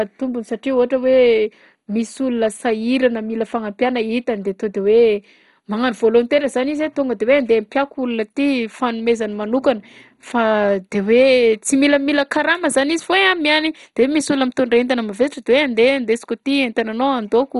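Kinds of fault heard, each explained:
MP2 compression: The speech sounds dull, with nothing above about 11.2 kHz for the whole clip. The bands that remain carry a gurgling, granular roughness, and upper detail seems to flicker in and out. That pattern points to MPEG Layer II coding, which is the likely cause. It splits sound into sub-bands and starves them of bits. The damage is heavy, which fits a low bitrate of around 56 kbps.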